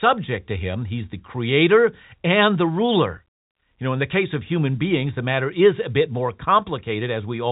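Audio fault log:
No fault to log.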